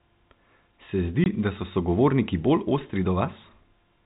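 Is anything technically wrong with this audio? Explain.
Yes, there's one dropout in this speech clip: packet loss filled with silence, from 1.24 to 1.26 s. A 20 ms hole, about one packet's worth, went missing and the receiver filled it with silence. The sound cuts out abruptly, heard through the band-limited G.711 telephone coding.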